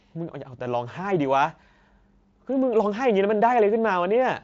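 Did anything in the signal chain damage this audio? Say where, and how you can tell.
No, the speech comes through a Speex codec that sounds like it is running at one of its highest quality settings, with at most faint coding damage, and its spectrum ends at about 7.7 kHz, as expected from a wideband Speex path.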